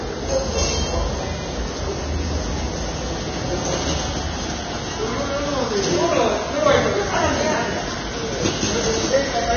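Vorbis compression throughout this everyday-sound recording: nothing above 6.5 kHz, and grainy, hissy treble with heavy codec damage, likely from very low-bitrate Vorbis encoding, around 19 kbps.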